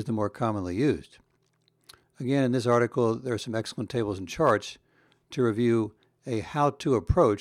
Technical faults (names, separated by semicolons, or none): block size mismatch (truncated)